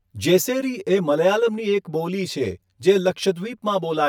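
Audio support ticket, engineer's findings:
Channel delay (comb filtering) throughout the speech. Hollow, phasey tone, steady from start to end. Probable component: stereo-to-mono summing stage, one channel lagging about 10 ms. Fixed notches starting near 50 Hz, repeating roughly every 100 Hz. Unlike room reverb: no decay tail. Unlike a flanger: notches do not sweep.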